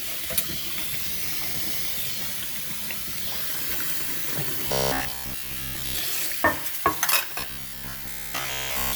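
A recording of sounds turns into robotic sound from repeated short buffers from 4.68 to 5.99 s and again from 7.40 s to the end. Both stretches take on a rigid, metallic buzz at 66.7 Hz, likely from a stalled stream replaying a 15 ms chunk over and over, so that most of the real audio in those spans is skipped. Unlike mains hum, the buzz comes and goes with the dropouts and still roughly tracks the underlying sound.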